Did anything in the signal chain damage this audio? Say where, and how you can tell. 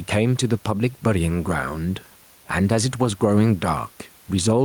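Yes. Gain pumping runs through the whole speech clip: the room noise, about 37 dB below the speech, swells in each pause and ducks by roughly 5 dB under every loud syllable. This likely comes from excessive input gain driving a fast limiter at capture.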